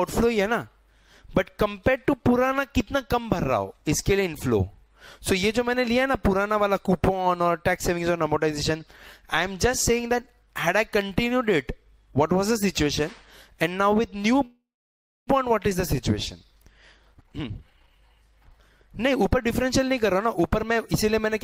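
At 14.45 s the sound stalls in a call audio freeze that lasts until 15.29 s. The last bit of sound is stretched into a fading buzz or hiss. It then drops to silence for about 0.64 s. The likely cause is packets held up in transit, so the jitter buffer ran empty. The receiver filled the gap with about 0.82 s of invented sound. When the packets arrived, the audio resumed where it stopped. Nothing is missing, but the delay grew by 816 ms.

From 17.02 s to 20.93 s there is a jitter buffer speed-up. The buffer was holding more audio than its target. To shrink the delay, the receiver cut out many tiny pieces, each one or a few pitch periods long. Playback runs at 121% of normal speed. The pitch stays the same. Roughly 0.7 s of audio is dropped across this stretch.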